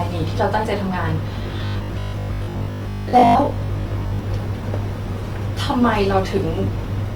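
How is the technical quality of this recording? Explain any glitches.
The recording has two audible problems: a grainy coding texture throughout and a stretch of mechanical buzzing.

Across the whole clip the speech sounds rough and grainy, with plainly audible damage even though the bandwidth stays full. This likely comes from Opus compression in its CELT music mode, where thin bit allocation fills bands with folded or noise-like energy. The texture fits a low rate near 24 kbps.

From 1.43 to 4.19 s the speech turns into a rigid, metallic buzz pitched at 50 Hz. This is robotic sound from repeated short buffers. It likely happens when audio arrives late and a chunk of about 20 ms is replayed to fill the gap, so roughly half of that stretch is repeats rather than new sound.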